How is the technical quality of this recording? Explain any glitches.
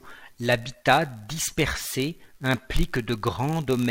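The recording has one fault, present for its whole length: a block size mismatch (padded). One stage hands over audio in blocks slightly shorter than the next stage expects, so each block is topped up with a brief run of zeros. Those tiny silences repeat about 91.5 times a second, laying a steady buzz under the speech, and the speech runs at 0.996 times normal speed with its pitch essentially unchanged.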